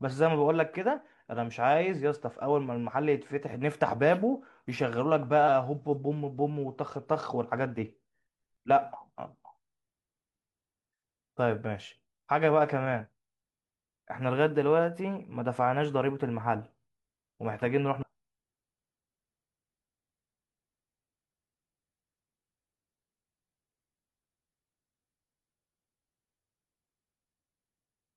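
At 5.44 to 5.48 s and again at 17.98 to 18.03 s, a short glitch cuts through the speech. Both are damaged data in a compressed stream. Corrupted bytes make the decoder misread frames, lose sync, and hunt for the next header.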